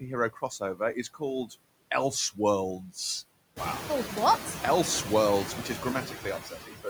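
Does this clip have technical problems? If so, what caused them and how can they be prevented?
Yes. Noise suppressor artifacts run through the whole clip. The suppressor pulls down every band it judges to be steady noise by about 21 dB, frame by frame. The room noise drops away between phrases and swells back under the speech. This is most obvious after the room noise climbs by about 13 dB around 3.5 s, leaving it only about 9 dB below the speech. A gentler suppression depth, or quieting the room, would prevent this.

Speech cut by the noise suppressor occurs at 0.31–1.22 s, 1.46–1.55 s, 6.06–6.26 s (just after "which is") and 6.42–6.87 s. At these points the suppressor mistook quiet parts of the speech for noise and turned them down with the background, by up to about 13, 12, 10 and 16 dB. The affected speech sounds swallowed or faint, about 0.3, 0.1, 0.15 and 0.3 s in total in each span. 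Lowering the suppression strength or improving the signal-to-noise ratio at the microphone would stop this.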